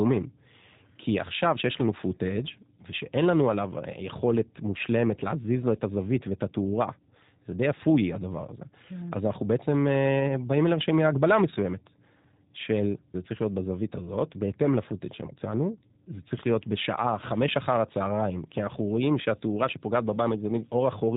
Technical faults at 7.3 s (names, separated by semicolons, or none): G.729 codec